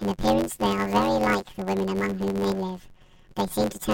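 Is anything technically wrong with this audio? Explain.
Yes. Throughout the speech, planar audio read as interleaved replays each 10.9 ms left-then-right block as two double-speed halves. This gives a robotic 91.9 Hz buzz without an octave shift, and regular vertical striations on a spectrogram.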